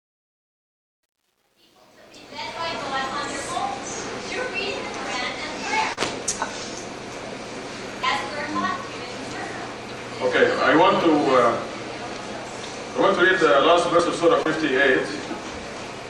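Over the opening 2.73 s the level rises in a fade-in, but the quiet part carries truncation distortion on a fade: the low-level waveform is reduced to coarse steps with no dither, which fits a 10-bit gain stage. From 0 to about 2.15 s the sound is gritty, unlike the steady hiss that dither would leave.

At 5.06, 8.03, 11.01 and 13.99 s the sound jumps forward abruptly. Each time roughly 20 ms is missing and the two sides butt together with no silence. This is audio missing between chunks, likely lost at the boundaries of 3-second processing blocks. The regular spacing of about 3 s and the hard join set it apart from the smeared gaps described next.

From 5.93 to 5.98 s, and again from 14.43 to 14.46 s, there is short concealed packet loss. About 40 ms and then 20 ms never arrived, and the receiver filled the holes by extending the preceding sound before blending back. These gaps are heard as a brief smear or wobble rather than a clean skip.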